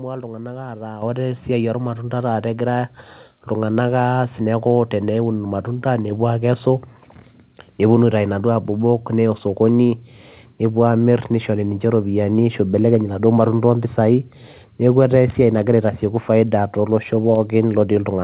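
At 1.02 s the microphone volume is stepped up by about 8 dB, and at 2.04 s it rises again by about 1 dB. Each time the call software judged the input too quiet and raised the device gain in a single jump, so the voice and the background noise grow louder together. On a waveform the envelope widens abruptly at each point. A spectrogram shows every band brightening at once, the first step plainly and the second barely.

From 15.30 to 15.37 s there is a loose connector crackle, a short irregular scratch lasting about 70 ms. A worn or dirty contact was rapidly making and breaking, chopping the signal on and off. The waveform shows jagged spikes and brief dropouts clustered in that window. On the spectrogram they appear as scattered vertical streaks spanning the full band, which here stops at 4 kHz, consistent with a narrowband telephone codec such as G.711.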